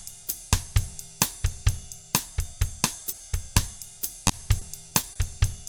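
At 3.10 s a single stretch of about 20 ms failed to arrive in time, a short concealed packet loss. The decoder bridged it by extending the preceding sound and blending back into the real signal, leaving a brief smear.

From 4.27 to 5.20 s losses recur, giving repeated packet loss with a robotic sound. Short holes of up to 20 ms each are patched in turn, about 12% of the span, so the sound turns choppy, with small pieces missing.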